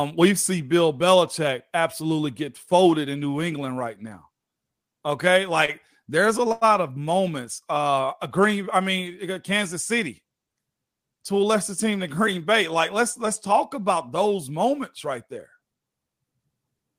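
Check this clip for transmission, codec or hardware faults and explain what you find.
Two short stalls from a late packet are present. At 5.65 to 5.71 s, just before "there's a", and again at 6.52 to 6.64 s, between "there's a" and "of moments", a packet arrived late and the jitter buffer ran dry. The receiver stretched the preceding sound by 27 ms and then by 92 ms before resuming where it left off. Nothing is lost, but a sound drags audibly, with a faint buzz or dip, and the second stall is clearly longer.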